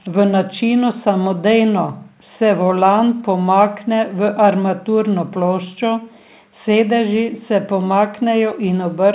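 No audible technical faults.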